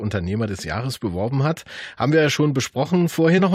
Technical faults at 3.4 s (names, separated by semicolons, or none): damaged data in a compressed stream